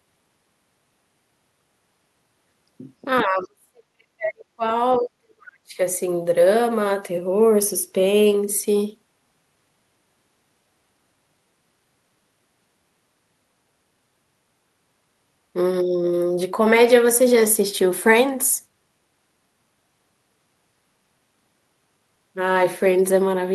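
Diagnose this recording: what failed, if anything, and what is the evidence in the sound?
The call processing stage, likely the echo canceller, failed under double talk and produced speech suppressed in double talk. When the far side spoke over the local talker, the canceller seems to have treated the whole microphone signal as loudspeaker echo and pulled it down. The talker's speech sinks from 3.22 to 4.70 s and again from 4.98 to 5.79 s. At its deepest it falls by roughly 40 dB, so parts of those stretches nearly vanish.

Between those two dips, the same call processing let the other side's voice leak through. The canceller's echo estimate likely did not remove all of the loudspeaker signal picked up by the microphone. A brief scrap of the far voice appears from 4.92 to 4.98 s, roughly 20 dB below the local speech, before suppression clamps down again.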